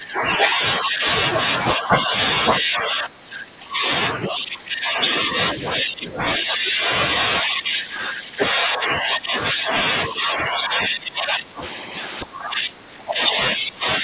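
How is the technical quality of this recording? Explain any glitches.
The speech keeps sinking in level through most of the recording. This is speech suppressed in double talk, running from 0.0 to 1.06 s, 1.43 to 2.14 s, 2.55 to 6.89 s, and 7.42 s to the end. The drops reach about 15 dB, 10 dB, 20 dB and 20 dB. The likely cause is an echo canceller mistaking the talker for loudspeaker echo while the far side spoke, and ducking both. Unlike packet loss, the audio drops in level rather than clicking out, and the narrow band stopping near 4 kHz fits a G.711 call codec.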